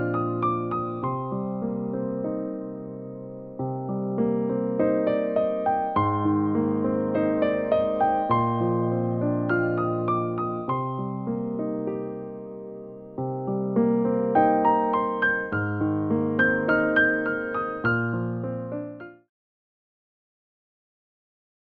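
No technical faults are audible; the level eases down from about 18 s to silence by 19.3 s in a smooth, deliberate fade-out with no click or hard edge.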